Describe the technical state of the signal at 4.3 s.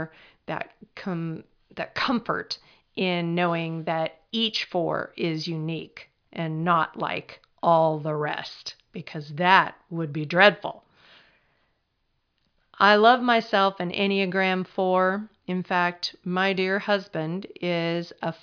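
At 4.3 s the speech signal is intact, with no audible dropout, distortion or other fault at that moment.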